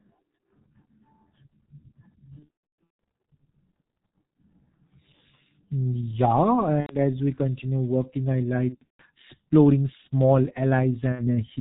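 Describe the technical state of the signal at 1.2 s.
At 1.2 s the speech carries G.723.1 codec damage, present for the whole clip. The sound, with nothing above 4 kHz, fits a 6.3 kbit/s stream coded in 30 ms frames with a slowly updated voice model, leaving it muffled and hoarse, with smeared consonants.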